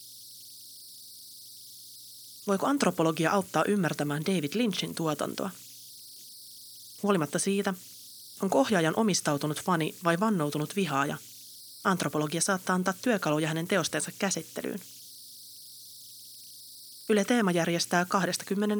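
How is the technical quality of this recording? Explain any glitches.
The recording carries a persistent fault across its whole length: converter idle tones. A whistle sits around 5 kHz, with grainy noise under the quieter speech, at about 22 dB below the signal. It comes from an undithered delta-sigma converter. When the input gets small, its modulator settles into repeating bit patterns, and those cycles produce tones. The pitch of those tones depends on the input's offset.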